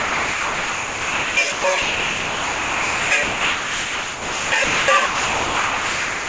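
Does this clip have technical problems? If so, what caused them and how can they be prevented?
Yes, this is sound dropped by the voice detector. The audio keeps turning into steady, featureless noise at 0 to 1.37 s, 1.52 to 1.64 s, 1.82 to 3.11 s, 3.23 to 4.52 s, 4.64 to 4.88 s and 5.06 s to the end, leaving only brief flashes of real sound between those stretches. The likely cause is the sender's detector treating this non-speech sound as background, so it stopped transmitting while the receiver filled in comfort noise. The top end is capped at 8 kHz, which fits a G.722 call path. To prevent it, turn off voice activity detection (DTX) on the sender for calls that carry music or other non-speech sound.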